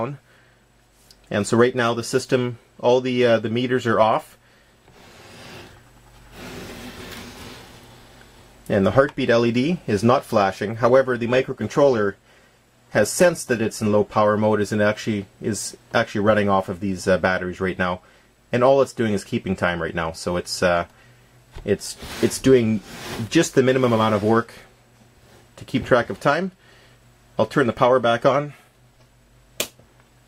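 From 10.78 to 14.29 s, a call bitrate drop makes the sound coarse, rough, watery or muffled. It points to roughly 128 falling to 20 kbps, then it recovers.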